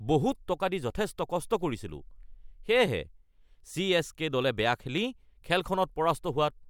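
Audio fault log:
No faults heard anywhere in this speech recording.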